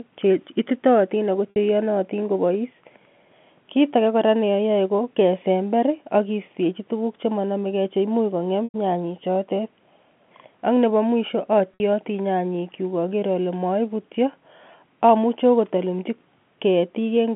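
Packet loss with pitch repetition occurs in this speech clip at 1.50–1.56 s, at 8.64–8.74 s just before "nyanyek chotet", and at 11.74–11.80 s just before "nyanyik kyuk aker ole". Each 60 to 100 ms gap is bridged by repeating the last pitch period and fading it out over about 50 ms, within the G.711 telephone band of about 150 Hz to 3.4 kHz.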